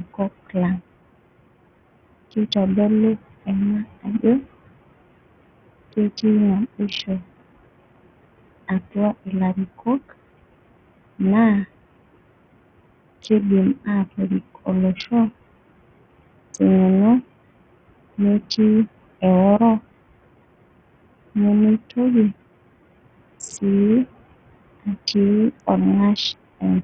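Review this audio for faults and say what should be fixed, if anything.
Noise suppressor artifacts run through the whole clip. The room noise, which sits about 17 dB under the speech, is pulled down by about 21 dB between phrases and comes back under them. A gentler suppression depth or a better noise estimate would prevent this.

A gritty, heavily compressed sound is also present throughout. The treble flickers and drops out, and a coarse grain rides on the speech. This is likely Bluetooth SBC compression. Its bit pool is too small to fund the upper sub-bands, which fits a low bitrate near 48 kbps. A higher SBC bit pool or a better codec would prevent it.

Speech cut by the noise suppressor happens twice, from 4.03 to 4.24 s and from 9.78 to 10.13 s. Each time the suppressor treats part of the speech as noise. It drops the speech by up to about 16 dB for roughly a tenth of a second, and the sounds come out swallowed. 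Protecting speech-like frames from suppression would prevent it.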